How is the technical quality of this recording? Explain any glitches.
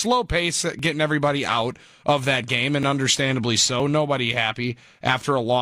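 The recording has three small skips, all from overlap between stream segments. They fall at 0.79 to 0.84 s, just before "everybody out of that"; at 2.83 to 2.87 s, right after "out of that game"; and at 3.80 to 3.83 s. Two segments claimed the same stretch of time. The player trimmed the overlap, dropping about 35 to 42 ms of real audio. The waveform jumps across the gap, so each is heard as a click or tiny skip. The stream uses one-second segments.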